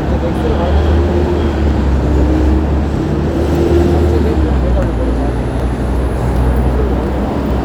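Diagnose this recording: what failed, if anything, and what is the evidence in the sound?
Regular clicks every 1.92 s from 1.77 to 7.51 s, seen as thin vertical broadband lines and waveform steps. These are clock drift buffer slips, likely from mismatched device clocks at the driver buffer.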